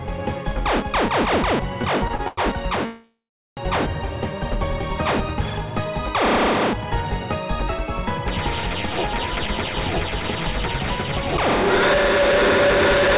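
The audio carries the narrow band of a call link, with nothing above 4 kHz, which fits G.711 mu-law at 64 kbps. From 1.82 to 2.40 s there are repeated stalls (stutter): four short gaps, the longest 97 ms, are filled by stretching the preceding sound, so the passage drags without losing content. From 2.86 to 3.60 s a call audio freeze holds the sound as a fading buzz that drops into roughly 0.39 s of silence before resuming where it stopped, likely because delayed packets let the jitter buffer run empty. From 9.31 to 11.38 s a jitter buffer speed-up plays the audio at 109% with unchanged pitch, trimming about a fifth of a second of pitch-period slices to shed the accumulated delay.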